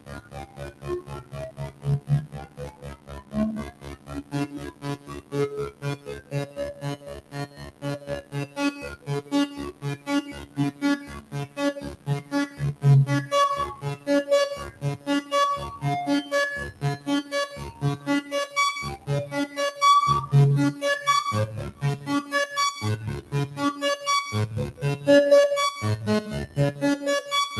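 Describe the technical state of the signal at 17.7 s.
At 17.73 to 18.56 s, sound cut by the noise suppressor: the suppressor mistakes this sound for noise, dropping it by about 10 dB for roughly 400 ms, visible as a sunken waveform envelope and faded spectrogram energy. This sits within a noise suppressor applied to music or sounds throughout, where held content and tails are pulled down while attacks pass, swinging level by around 20 dB and giving a pumping, thinned sound seen as a fluttering waveform envelope.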